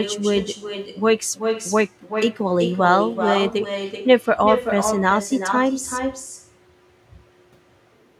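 From start to finish the speech carries an echo with no canceller. The far end is plainly playing the call through a loudspeaker, its microphone picks that back up, and nothing strips it out, so every phrase returns a bit under half a second later, about 6 dB quieter. You hear it as a thinner shadow trailing each utterance, giving the whole thing a doubled feel.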